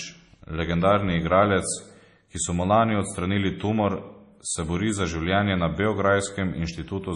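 Throughout the speech, the treble stops dead at 10.5 kHz and the sound turns watery and swirly with smeared attacks, likely from heavy MP3 compression at a bitrate that fits 32 kbps. A spectrogram shows a flat ceiling and flickering holes.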